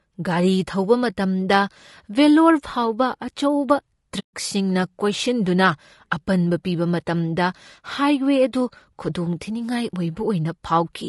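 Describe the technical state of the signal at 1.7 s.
At 1.7 s the speech sounds rough and grainy, with noise filling the gaps between harmonics. This runs through the whole clip. The likely cause is low-delay AAC compression, whose short frames resolve pitch poorly. The damage fits a bitrate near 32 kbps.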